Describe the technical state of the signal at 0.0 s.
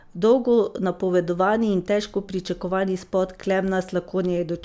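At 0.0 s the speech signal is intact, with no audible fault at that moment.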